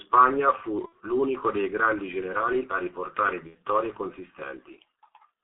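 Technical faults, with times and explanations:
Throughout, G.723.1 codec: The whole clip is heavily damaged by a low-rate telephony codec. Content is confined to roughly 200 Hz to 3.7 kHz, so the speech sounds muffled and lacks air. The heavy coding leaves a hoarse, rough texture and smeared consonants because the vocal model is refreshed only every 30 ms frame. The sound fits the 6.3 kbit/s mode of G.723.1.
0.86 to 0.93 s and 3.47 to 3.55 s, VoIP packet loss concealed by the speech codec: In both places the speech briefly turns into a stretched, buzzy or noisy sound that weakens instead of continuing naturally. The decoder is repeating its last pitch and spectral shape with falling gain to cover missing audio. Each gap fits two lost 30 ms frames. Because the decoder builds on that invented state, the speech stays thin and distorted for a short while afterwards.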